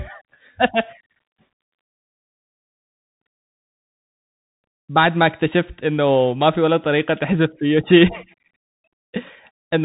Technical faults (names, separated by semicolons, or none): Bluetooth CVSD headset codec